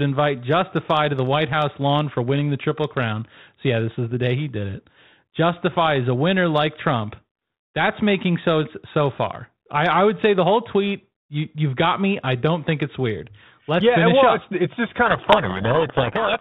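At 15.06 s, right after "it's just", the speech is abruptly buried in harsh distortion that lasts to the end of the clip at about 16.4 s. This is a codec payload misread: the receiver takes each G.726 code word with its bits in the wrong order, so it rebuilds the wrong differences. Before this point there is only the light coding noise expected of 32 kbit/s G.726. A lower G.726 bitrate would sound different: its rasping hiss is present throughout and follows the speech level. This distortion starts suddenly and swamps the speech.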